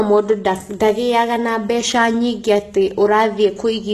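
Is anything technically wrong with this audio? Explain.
Yes. Throughout the speech, the treble appears to have been rebuilt rather than transmitted, likely by HE-AAC compression at a low bitrate, roughly the 16 kbps range. The codec carries only the lower spectrum and fills the upper bands by copying lower content upward under a coarse envelope, so the recreated harmonics don't align with the real ones. The result is plainly audible: s sounds come out gritty and metallic or lispy, and nothing survives above 12.3 kHz.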